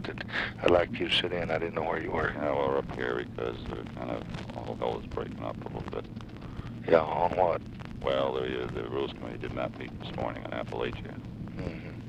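No dropouts, clicks, distortion or timing errors are audible anywhere in the clip.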